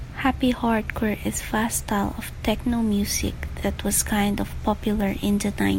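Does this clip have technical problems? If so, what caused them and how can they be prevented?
No, nothing stood out as a technical problem when listening to this speech clip.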